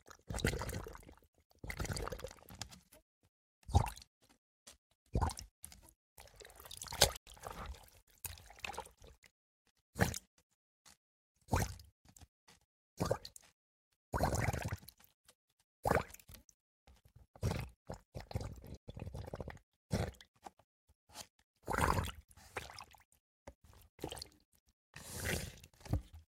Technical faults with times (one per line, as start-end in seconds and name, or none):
7.17-7.27 Bluetooth stall
16.54-16.60 Bluetooth stall
18.77-18.88 Bluetooth stall